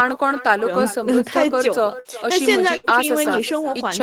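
Throughout the speech there is echo with no canceller. The far end is playing the call on a loudspeaker, its microphone picks it up, and nothing removes it before it returns. Every phrase is shadowed, after a delay of a little under half a second, by a copy about 16 dB quieter and thin, which trails each syllable and smears the gaps between phrases.

At 1.99 to 2.08 s a burst of packet loss interrupts the audio. The receiver fills about 54 ms by stretching the last sound it had and fading it, so a voiced sound becomes a short held buzz and anything else becomes a dying hiss. The same thing happens at 2.77 to 2.86 s, with about 66 ms concealed. Each time the speech resumes with roughly 60 ms of content gone.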